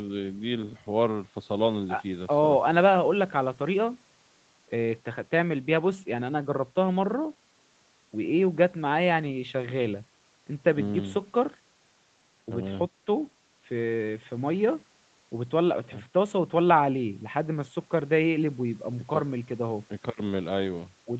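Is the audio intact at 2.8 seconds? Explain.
Yes, at 2.8 seconds the speech is intact, with only the normal band-limiting of the call path, which leaves nothing above about 8 kHz.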